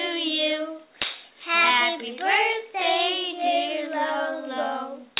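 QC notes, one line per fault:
No faults to log here; it's just ordinary call-path audio with nothing above about 4 kHz, which fits a G.711 A-law connection.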